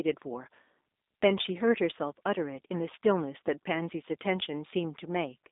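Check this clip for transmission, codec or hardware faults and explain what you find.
One fault runs through the whole recording: G.729 codec coding. Across the entire clip the speech is band-limited to roughly 250 Hz to 3.7 kHz, with nothing above 3.8 kHz. It sounds plainly rough and slightly synthetic, which fits G.729A at 8 kbit/s rebuilding each frame from a vocal tract filter, a pitch predictor and sparse pulses. A spectrogram would show a hard ceiling near 3.8 kHz and smeared, blocky harmonics.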